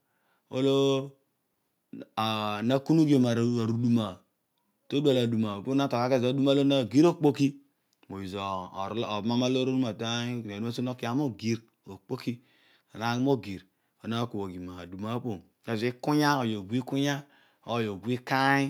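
Nothing in the speech stood out as a technical fault on listening.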